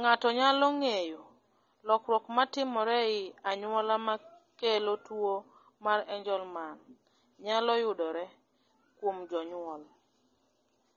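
Speech runs the full clip with plainly audible coding damage throughout, most likely from AAC compression (AAC-LC). Nothing is present above 7 kHz, so the voice sounds dull and band-limited. That cut-off points to a low bitrate, around 24 kbps, where the encoder discards the top of the spectrum to spend its few bits on the lower bands. On a spectrogram this appears as a flat, hard ceiling at 7 kHz running the whole length, with empty space above it.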